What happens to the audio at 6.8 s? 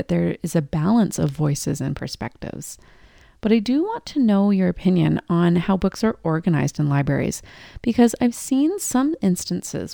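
Imaging from linear upsampling runs through the whole clip: the speech was raised in rate by straight-line interpolation, which fits a 24 kHz source. At 6.8 s this dulls the top and leaves faint mirror images at 12 to 24 kHz, roughly 30 dB down, heard as a light metallic shimmer on sibilants.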